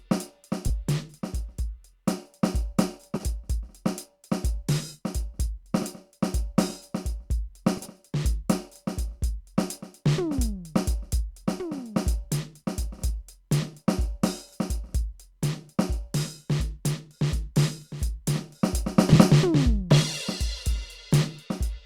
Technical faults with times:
0.68-0.70 frames out of order
3.15-3.24 frames out of order
7.77-7.87 frames out of order
12.62 frames out of order
19.09-19.16 frames out of order

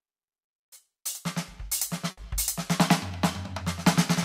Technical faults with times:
2.11-2.19 burst of packet loss

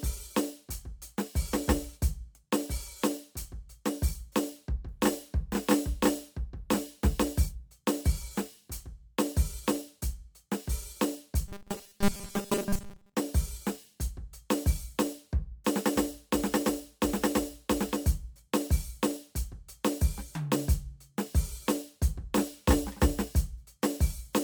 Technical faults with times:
11.48-13.15 robotic sound from repeated short buffers

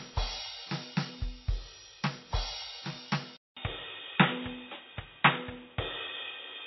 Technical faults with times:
0.00-6.66 MP3 compression
3.37-6.66 input switched to a poorer device

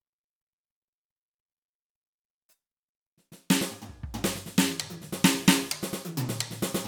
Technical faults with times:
none

